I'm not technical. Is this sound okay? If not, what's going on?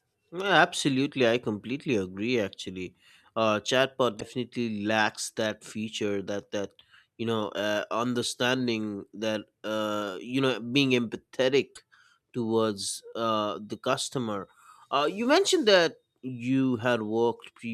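No. There is damaged data in a compressed stream, twice: from 4.17 to 4.23 seconds and from 11.72 to 11.79 seconds. A bit of the stored file is corrupted there. The player stumbles over it and briefly makes a short chirp or squawk.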